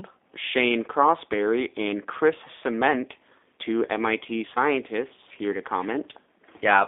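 Throughout, a G.729 codec, fitting an 8 kbit/s stream, rebuilds the speech from sparse pulses: a 250 Hz to 3.6 kHz band, audibly rough and synthetic.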